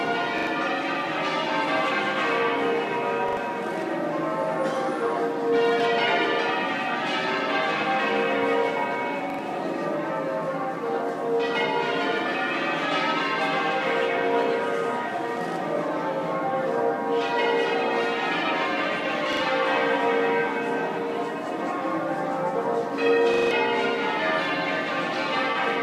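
Repeated buffer stutters at 0.38, 3.29, 9.30, 19.33 and 23.34 s. Audio arrived late, so the same roughly 43 ms chunk, which fits a 2048-sample buffer, plays twice more with hard joins. The last one repeats four times. Each stutter drops about a tenth of a second or more.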